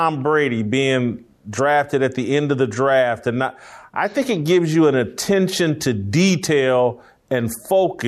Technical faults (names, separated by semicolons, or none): none